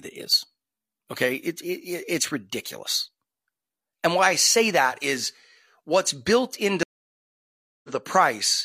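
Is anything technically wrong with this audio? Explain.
Yes, there are two faults.

At 2.66 s there is a bit error spike. One stored or transmitted bit flipped in a single sample, throwing its value off by a power of two before the next sample returns to normal. You hear one sharp tick that has nothing to do with the speech. On a waveform it is a lone one-sample needle. On a spectrogram it is a thin vertical line running through every frequency.

From 6.83 s to 7.90 s there is a stream reconnect, just after "that is what's built". The connection dropped, playback went silent for about a second, and the player reconnected and started a new decoder partway through the stream. The speech picks up at roughly the point where it stopped, with little or nothing skipped, and its first moments come back muted or faded in. A waveform shows a flat gap followed by a gradual swell, and a spectrogram shows an empty band that brightens from faint.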